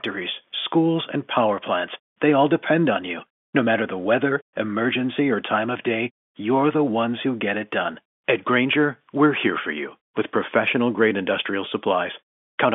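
Nothing in this speech sounds faulty.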